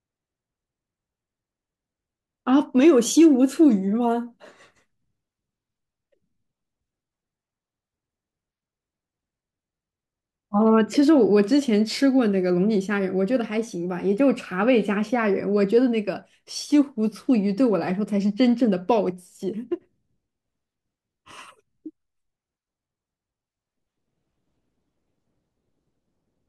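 Nothing goes wrong anywhere in this recording; there's simply no technical fault to point to at any moment.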